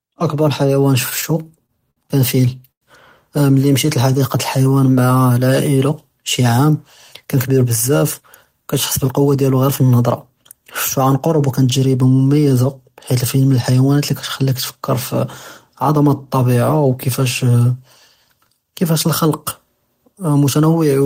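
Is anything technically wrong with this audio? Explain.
Yes, this speech clip has four network-timing faults.

Between 1.09 and 1.98 s there are repeated stalls (stutter). Packets arrived too slowly, so the jitter buffer emptied six times and the receiver stretched the last sound each time, about 131 ms in all, the longest gap 57 ms. Nothing is lost, but the speech jerks. A spectrogram shows short smeared, flattened patches between normal frames.

From 2.71 to 2.83 s there is a call audio freeze, likely caused by packets held up in transit. The last sound is carried on for about 102 ms, mostly as silence (about 90 ms), and then speech resumes where it stopped. The waveform shows a brief flat gap.

Between 3.86 and 5.35 s a jitter buffer slow-down adds about 146 ms by repeating pitch periods. Speech runs at 91% speed with unchanged pitch, so sounds are drawn out. Harmonics on a spectrogram stay level while syllables widen and repeated cycles line up in the waveform.

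From 7.25 to 9.63 s a jitter buffer speed-up trims short pitch-period pieces, removing roughly a fifth of a second to reduce excess buffered delay. Speech plays at 108% and sounds hurried but not higher. A spectrogram shows compressed syllables with steady harmonic spacing.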